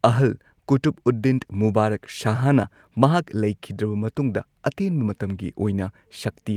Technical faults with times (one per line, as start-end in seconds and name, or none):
none